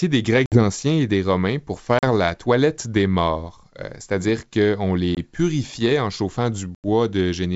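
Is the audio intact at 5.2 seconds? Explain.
No. There's packet loss on the ADPCM call from 5.15 to 5.18 s. A couple of packets drop into a hard-edged 20 ms silence, and the decoder's predictor loses sync, so the speech comes back slightly distorted.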